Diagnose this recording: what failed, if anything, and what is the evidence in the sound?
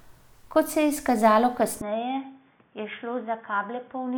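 Input switched to a poorer device at 1.81 s, after "se je izkazalo": speech abruptly loses everything above 3.6 kHz, drops about 10 dB and gains a new, faint noise floor, likely a driver-level device change.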